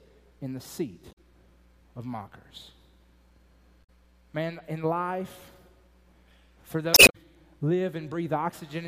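Damaged data in a compressed stream appears three times: from 1.09 to 1.18 s, from 3.80 to 3.90 s, and from 6.91 to 7.15 s. Corrupted bytes in the encoded file leave the decoder unable to read those frames correctly, so it loses frame sync and hunts for the next valid header. Each time the audio breaks into a brief chirp, squawk, click or short hole before decoding recovers, with the last the longest, about a quarter of a second.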